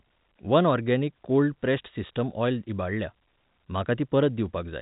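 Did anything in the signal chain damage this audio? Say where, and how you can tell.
No, nothing damaged this audio.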